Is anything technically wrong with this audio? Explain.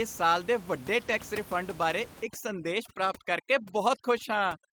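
Yes. From 1.07 to 1.13 s, between "ਇਸ ਸਾਲ ਦੇ ਵੱਡੇ" and "ਰਿਫੰਡ ਬਾਰੇ", the speech turns briefly rough and grainy with no gap: a lost packet rebuilt from error correction. About 40 ms, consistent with two lost packets, was replaced by the lower-bitrate backup copies carried in the following packets.

From 2.23 s to the end, after "ਰਿਫੰਡ ਬਾਰੇ", the background drops and breaks up into twinkling specks. This is overdone noise removal: bands near the estimated noise floor are cut, taking quiet speech detail with them. The room noise that aggressive processing was acting on sits about 19 dB below the speech.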